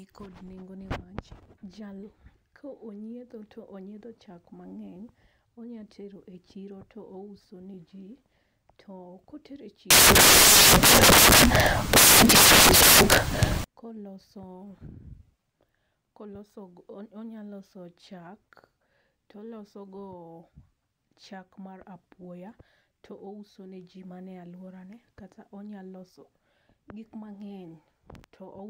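From 9.91 to 13.64 s the speech turns into loud, harsh broadband noise: samples built from the wrong bytes. The bytes of each sample are misassembled, so the jittery low bits dominate.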